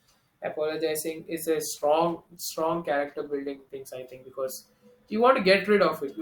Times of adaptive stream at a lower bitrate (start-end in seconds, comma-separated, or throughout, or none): 1.76-3.76